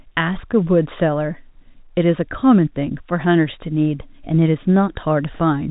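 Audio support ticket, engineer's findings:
Nothing stood out on listening: the speech carries the narrow band of G.711 telephone coding, with nothing above 3.8 kHz, and no fault was found.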